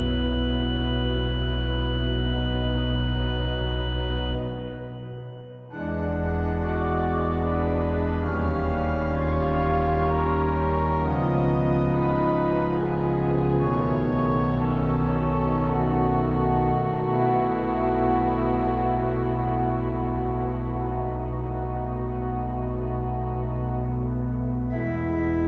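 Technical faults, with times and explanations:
No technical faults are present in this clip. The sound has nothing above 8 kHz, consistent with a call's microphone processing and Opus call path working as they should.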